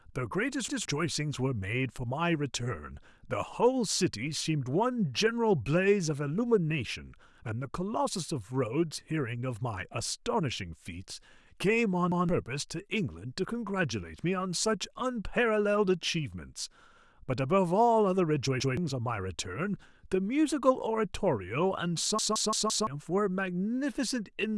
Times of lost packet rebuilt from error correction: none

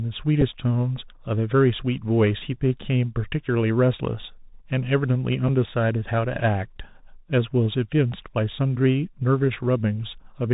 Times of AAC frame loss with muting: none

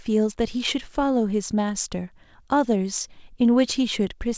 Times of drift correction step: none

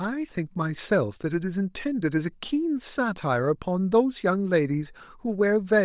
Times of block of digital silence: none

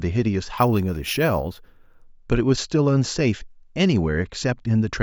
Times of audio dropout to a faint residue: none

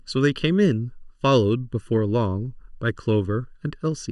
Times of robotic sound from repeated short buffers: none

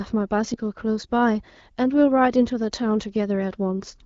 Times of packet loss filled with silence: none

